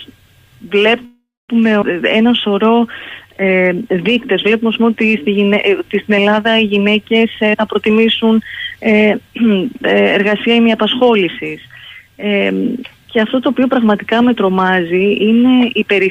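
A call audio freeze runs from 1.05 to 1.51 s. The last sound is carried on for 433 ms and fades, with about 240 ms of it fully silent. Nothing is lost afterwards. Packets were likely held up in transit, so the jitter buffer ran empty. Shortly after, at 1.81 to 1.84 s, comes a skip ahead. Roughly 150 ms of audio is missing. The two sides are joined with only a tiny 10 ms fill, so playback lurches forward. Two jitter buffer slow-downs follow. From 2.18 to 2.81 s the audio plays at 93% speed, with 49 ms added. From 3.27 to 3.95 s it drops to 89%, with 82 ms added. Repeated pitch periods stretch the sound without changing pitch. The receiver was rebuilding its reserve. Two jitter buffer speed-ups trim the delay again. From 7.22 to 8.77 s the audio runs at 115%, losing about 200 ms, and sounds hurried. From 15.52 to 15.93 s it runs at 108%, losing about 40 ms. Both come from the buffer holding more audio than its target.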